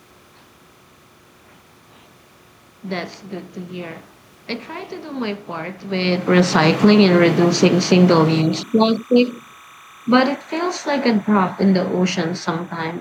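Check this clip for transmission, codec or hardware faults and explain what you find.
Two faults are audible in this speech: timecode bleeding in underneath the whole recording, and two stretches where automatic gain control pulls the level down.

Timecode bleed runs from start to finish. Linear timecode from an adjacent track or cable leaks in at roughly 30 dB below the speech, a square wave flipping between tones near 1 and 2 kHz at a 29.97 frames-per-second rhythm. The result is a steady chirping warble. Unlike a single-pitch hum or whine, it alternates between two pitches.

Automatic gain falling occurs from 6.3 to 9.46 s, just after "do my part with", with a drop of 10 dB. It happens again from 10.0 to 12.75 s, with a 5 dB drop. Each time, the control judged the input too loud, or its background noise too strong, and eased its gain down. A talker moving, as happens near 5.5 s, changes only the voice. 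Here the room noise sinks together with the speech.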